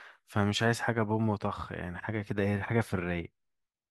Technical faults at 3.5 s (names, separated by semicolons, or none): none